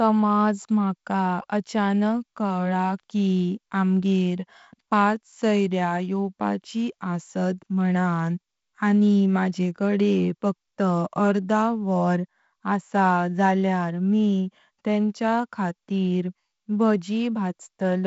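No technical faults heard.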